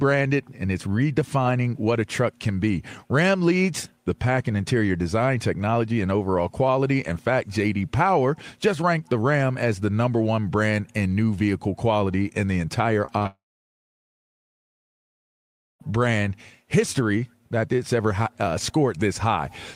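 Short concealed packet loss strikes three times in quick succession, at 13.05, 13.19 and 13.23 s, just after "quality in the entire". Each time about 20 ms of audio arrived too late, and the receiver bridged the gap by extending the preceding sound, leaving brief smears or wobbles.

Long network dropout follows from 13.27 to 15.82 s. The concealment carries the last sound briefly before it fades, leaving about 2.4 s of silence. Roughly 2.5 s of audio is likely lost in transit, and the sound resumes further on with that stretch missing.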